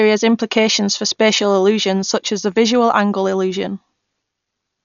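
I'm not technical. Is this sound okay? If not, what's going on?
No. The speech sounds dull throughout, with nothing above 7 kHz, plus a rough, fluttery hiss around voiced sounds, likely from heavy Dolby Digital compression rather than simple muffling.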